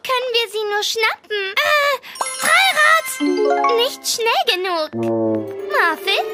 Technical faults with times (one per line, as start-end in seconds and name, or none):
4.29-6.19 train of clicks